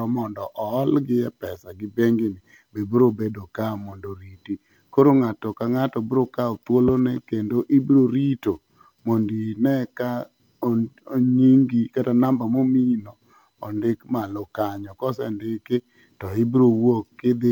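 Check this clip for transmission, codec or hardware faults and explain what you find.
Nothing to report: no transmission, codec or hardware fault is audible anywhere in the speech.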